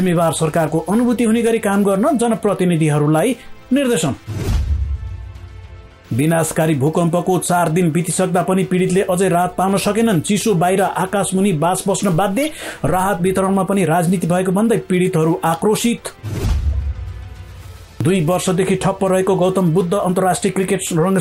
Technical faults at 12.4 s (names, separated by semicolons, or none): corrupt frame decoded